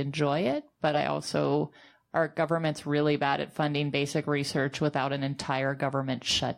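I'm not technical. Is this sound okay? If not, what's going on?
Yes, nothing in this recording stood out as a problem when I listened to it.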